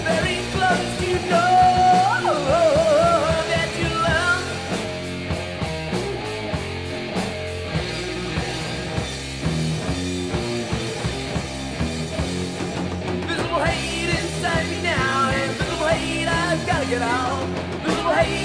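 No technical faults can be heard anywhere in this audio. There is nothing here that calls for a timestamp or an explanation.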